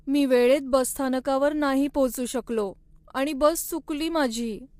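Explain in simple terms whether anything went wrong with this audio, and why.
The speech sounds rough and grainy from start to finish. There is a hiss between the tones of the voice, and the highest part of the sound seems dull or artificial. The likely cause is low-delay AAC compression, the kind used in video calls. It squeezes the sound into very short slices to keep delay low. Such short slices capture the voice's pitch poorly, and with little data to spare, the detail turns to grain.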